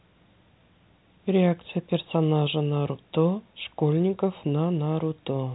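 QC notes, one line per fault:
No faults are audible in this speech clip. The G.711 telephone coding is working as expected, with the sound confined below 4 kHz and only a faint quantisation hiss that rises and falls with the level.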